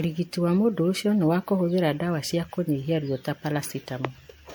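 Throughout the speech, the audio was likely run through MP3 encoding about four times, each pass requantising on a shifted frame grid, consistent with 96 kbit/s. This generation loss sounds swirly, hollow and smeared, with blurred attacks and nothing above 21.3 kHz.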